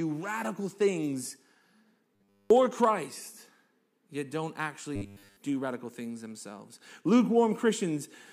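From 2.15 to 2.50 s and again from 4.96 to 5.37 s, the speech becomes a rigid, metallic buzz at 100 Hz. This is robotic sound from repeated short buffers, likely from essentially all the audio being replaced by looped 10 ms segments.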